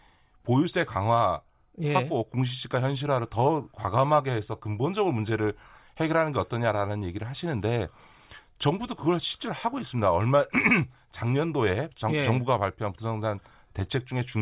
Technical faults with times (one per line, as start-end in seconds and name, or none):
none